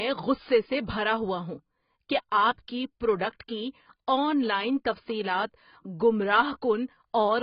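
From start to finish the speech sounds dull and smeared, warbling on vowels and fizzy on sibilants, with nothing above 5.1 kHz. The likely cause is heavy AAC compression, consistent with AAC-LC near 16 kbps, where the encoder lowers its cut-off and quantises coarsely.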